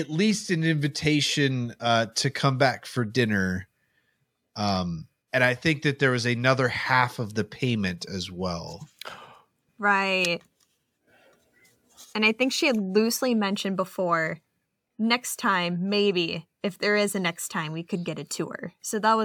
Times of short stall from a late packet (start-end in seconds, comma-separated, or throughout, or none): none